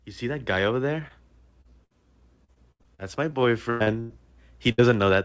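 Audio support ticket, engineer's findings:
Short concealed packet loss at 1.08–1.11 s and 1.61–1.66 s: brief smear where the jitter buffer's concealment continued the last sound for 15 ms and 30 ms, about 20 ms of audio lost each time, then blended back. Too short for an audible fade, unlike the bursts.

Burst of packet loss at 1.84–1.92 s and 4.72–4.80 s: consecutive packets lost or late, gaps filled for 58 ms and 62 ms by extending the last sound and turning it down. Audio resumes roughly 60 ms further on. Isolated single gaps, not a sustained run.

Repeated packet loss (robotic sound) at 2.44–4.12 s: 11 separate gaps in close succession, about a quarter of the stretch concealed, 422 ms filled and 440 ms skipped, longest gap 102 ms. This sustained chain of patches makes the sound choppy and robotic, unlike the isolated dropouts.

Call path: nothing above 8 kHz, a band limit consistent with a wideband call codec such as G.722.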